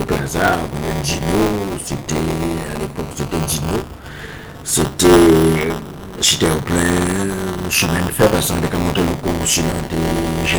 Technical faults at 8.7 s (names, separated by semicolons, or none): buffer tearing